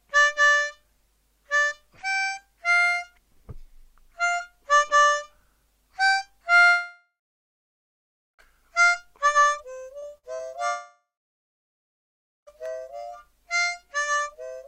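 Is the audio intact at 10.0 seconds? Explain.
No. From 9.99 to 10.05 s there is short concealed packet loss: about 40 ms of audio arrived too late for the decoder, and the receiver synthesised roughly 31 ms by extending the preceding sound before blending back, heard as a brief smear.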